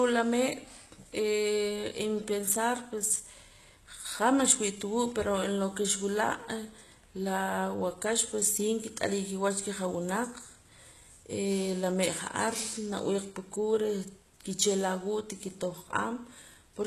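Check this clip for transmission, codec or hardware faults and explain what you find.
One codec fault runs through the whole speech clip. Sibilants sound gritty and metallic, and nothing is present above 12.3 kHz. The likely cause is HE-AAC compression at a low bitrate, near 16 kbps by the sound of it. The codec keeps only the lower band and synthesises the treble by copying lower bands upward under a coarse envelope. The copied harmonics don't line up with the real ones, so the top end sounds lispy and artificial.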